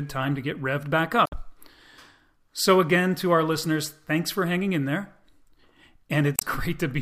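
At 1.24 to 1.33 s, right after "to get revved back", the compressed speech stream carries damaged data: corrupted bytes leave the decoder misreading frames, losing sync and hunting for the next valid frame header. For about 90 ms the speech is disrupted. The same damaged data in the compressed stream recurs at 6.36 to 6.43 s, a briefer blip of about 70 ms that breaks into the speech.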